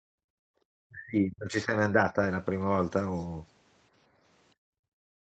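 From the start to 0.6 s the background is gated by the echo canceller. While the far-end loudspeaker signal is active, the canceller clamps the microphone path down by about 37 dB, so the room tone falls away to near silence instead of sitting steadily under the speech. It recovers once the canceller releases.

Between 0.88 and 1.73 s the speech itself is pulled down by as much as 35 dB. It thins and breaks into fragments, most likely because of speech suppressed in double talk: with both ends active, the canceller cannot tell the near talker from the loudspeaker echo and attenuates everything. Two further short dips of about 5 dB and roughly 50 ms each follow at 1.92 and 2.13 s, heard as slight momentary sags in level.

From 4.55 s to the end, the background is again gated by the echo canceller, with a drop of about 36 dB. The ambience collapses and stays down through the close of the clip. 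Throughout, the audio has a ceiling at 8 kHz, consistent with a wideband call path.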